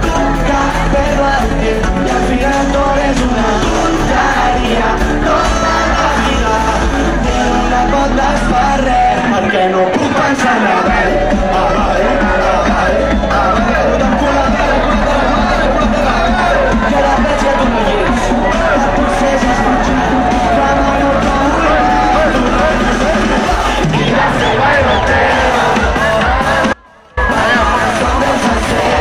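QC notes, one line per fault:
1.42 s, electrical switching spike: a sharp snap, only a few milliseconds long, lands on top of the sound without interrupting it. The transient has no acoustic decay or room tail, so it did not come from the sound source itself. It is likely a brief arc from a nearby switch, relay, motor or static discharge, coupled electrically into the audio line.
26.73–27.17 s, audio dropout to a faint residue: the sound cuts out abruptly for about 440 ms, then returns just as suddenly mid-flow. The gap is not silent. A faint trace of the signal remains, roughly 30 dB below its normal level. There is no fade at either edge, which rules out a natural pause. The likely cause is a momentary loss of the main signal feed, with the downstream chain still live and passing only leakage.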